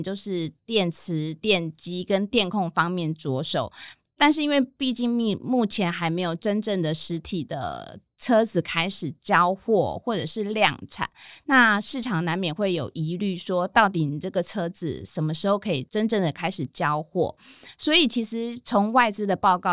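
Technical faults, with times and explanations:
No technical faults detected in the speech recording.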